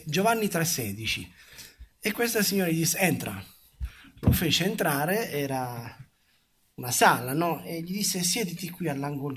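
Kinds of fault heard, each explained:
No audible faults detected.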